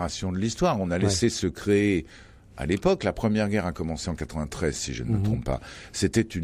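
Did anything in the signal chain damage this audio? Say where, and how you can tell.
No, nothing in this speech recording stood out on listening as damage from any stage of the chain.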